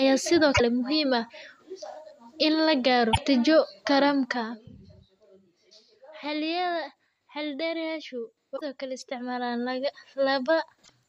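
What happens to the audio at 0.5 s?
At 0.51 s the compressed stream carries damaged data, lasting until about 0.61 s. Bytes in that stretch of the encoded file were lost, zeroed or overwritten, so the decoder misreads the frames there, loses its place in the stream and has to hunt for the next valid frame header before it can resume. For roughly a tenth of a second the speech gives way to a short chirp, squawk, click or hole before normal decoding picks up again.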